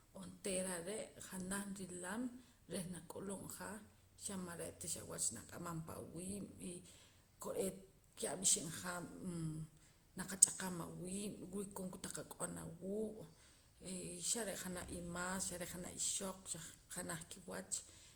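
Throughout, the speech was likely re-encoded about five times through Opus at around 64 kbit/s. This generation loss leaves a swirly, hollow, smeared sound with blurred consonant attacks.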